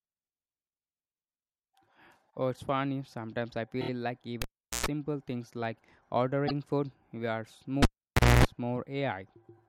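At 3.80 to 3.88 s there are repeated frames. One 26 ms block of the coded speech plays three extra times, adding about 78 ms. It stutters. At 4.42 to 4.86 s comes a cable pulled and plugged in. A pop cuts the sound for about 0.39 s. About 0.11 s of 60 Hz mains buzz follows as the plug half-touches, then a second pop. At 6.47 to 6.51 s the same frame fault recurs: one block plays once more, adding 26 ms, a brief hiccup. At 7.82 to 8.45 s the cable drops out again for about 0.57 s, with about 0.26 s of buzz before the return pop.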